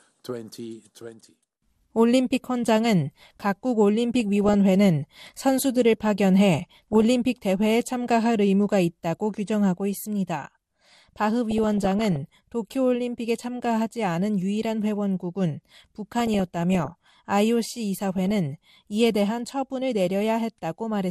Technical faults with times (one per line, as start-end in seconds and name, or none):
0.00-21.10 MP2 compression
4.20-4.54 DAB burbling
6.71-7.02 DAB burbling
11.51-12.33 DAB burbling
16.12-17.10 DAB burbling
18.16-18.31 DAB burbling